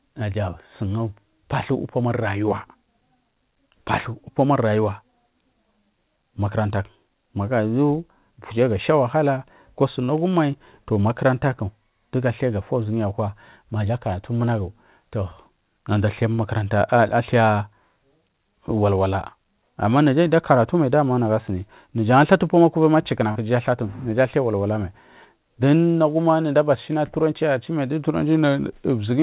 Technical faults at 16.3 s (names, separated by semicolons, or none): short stall from a late packet